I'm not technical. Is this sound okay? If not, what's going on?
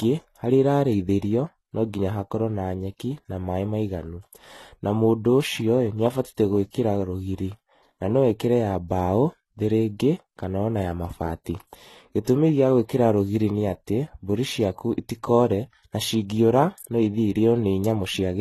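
No. Throughout the speech, the sound is dull, as if heard through a thin wall: the crisp top end stops at 12.1 kHz, and swirly, smeared traces hang on the sounds. This is most likely transcoding between lossy codecs. The recording was squeezed by one compression method built for very small files, then squeezed again by another. The second pass kept the first one's damage, added its own, and could not restore the lost treble.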